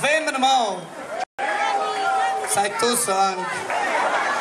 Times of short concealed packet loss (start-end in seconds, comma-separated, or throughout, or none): none